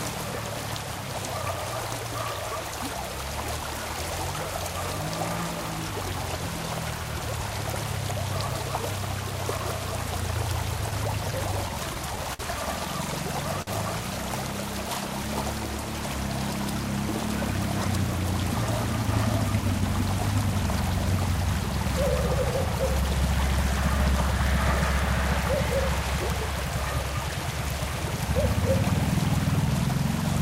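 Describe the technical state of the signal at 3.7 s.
At 3.7 s the audio is intact, with no audible technical fault at that moment.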